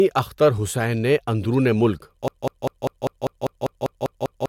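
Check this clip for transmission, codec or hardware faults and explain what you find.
One fault: a broken-record loop. From 2.28 s to the end, just after "حسین نے اندرون ملک", the stream likely stalled and kept resending its last buffered fragment. A piece of about 198 ms repeats exactly, back to back, eleven times, so the speech that should follow is lost.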